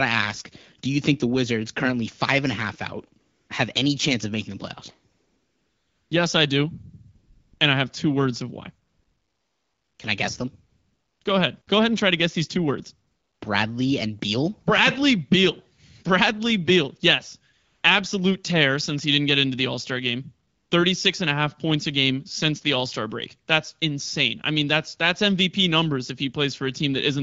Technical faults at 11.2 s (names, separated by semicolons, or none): AMR comfort noise